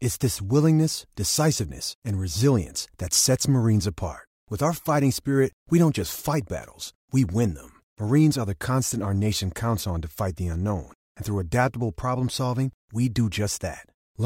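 No technical faults are audible anywhere in the speech recording.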